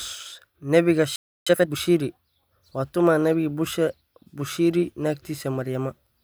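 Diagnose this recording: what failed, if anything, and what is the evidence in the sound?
At 1.16 s the speech halts mid-flow and the output stays silent until 1.47 s, a playback stall of about 306 ms, likely from the player's buffer running dry or its thread blocking. The waveform shows an abrupt flat gap; the spectrogram shows an empty vertical band.

From 1.47 to 1.77 s the player runs a time-compressed catch-up at twice normal speed, dropping small pieces of its backlog and cross-fading the joins. Pitch is unchanged, so the speech sounds hurried. The spectrogram shows harmonics at normal frequencies, squeezed in time.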